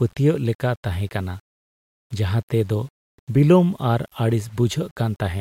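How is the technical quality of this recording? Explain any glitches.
The technical quality is compromised by grainy distortion that runs through the whole speech clip.

Low bit depth without dither, throughout: quiet passages turn gritty, and the fading ends of syllables break into a rough sputter before dropping to silence. The cause is likely samples rounded to 8 bits with no dither, so the error tracks the signal, sitting roughly 40 dB below it. A waveform zoomed in shows visible stair-steps, and a spectrogram shows a hash of noise that appears and disappears with the speech instead of a steady floor.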